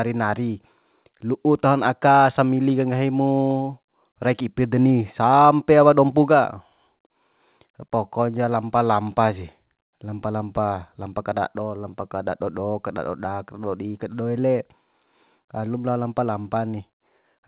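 There are no technical faults to describe in this speech, which arrives over a G.711 mu-law call path that carries nothing above 4 kHz.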